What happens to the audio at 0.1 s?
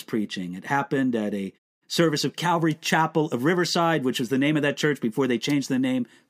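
At 0.1 s the speech is intact, with no fault or dropout at that moment.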